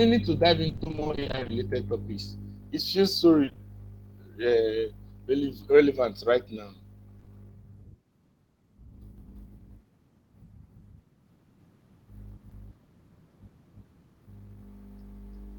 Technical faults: repeated packet loss (robotic sound); short concealed packet loss; doubled audio track

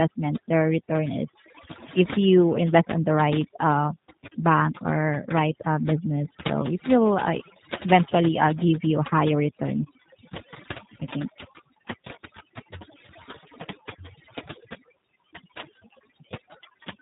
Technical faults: overdone noise removal; G.729 codec

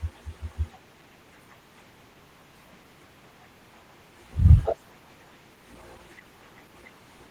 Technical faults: Opus voice compression

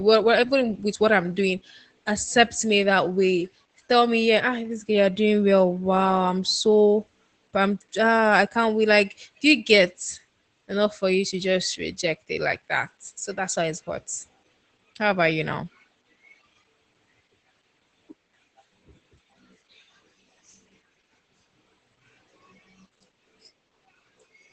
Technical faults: Opus voice compression

